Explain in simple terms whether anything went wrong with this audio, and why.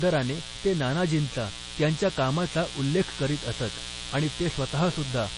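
A steady, raspy buzz runs under the speech from start to finish. This is mains buzz: sharp electrical spikes from a dimmer, rectifier or unshielded cable leak in twice per cycle of the 60 Hz power supply, stacking up tones that reach into the kilohertz range.

Throughout the clip the speech also sounds watery and swirly, with smeared attacks, and nothing at all comes through above about 10.4 kHz. That points to heavy MP3 compression, likely at a low bitrate, where the encoder drops weaker detail and cuts off the treble.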